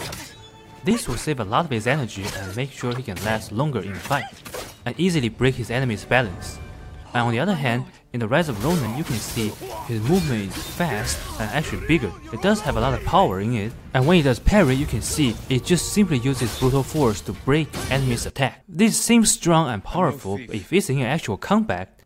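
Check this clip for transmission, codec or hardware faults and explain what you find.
Two brief skips come from overlap between stream segments, at 16.85 s and 20.83 s. Overlapping timestamps make the player discard a few milliseconds of unduplicated sound. The skips fall about 4 s apart, matching segment boundaries.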